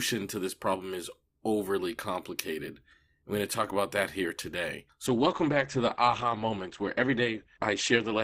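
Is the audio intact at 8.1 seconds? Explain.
No. At 8.1 seconds the speech is inside a stretch where the adaptive stream switched to a lower bitrate. The switch comes right after "about that here today", at 5.07 s, and lasts to the end at 8.24 s. The connection slowed, so the player swapped to a leaner encoding with no gap. Nothing above 8.7 kHz survives, so the treble is dull. Codec artefacts thicken. The sound fits a drop from 64 to 16 kbit/s Opus.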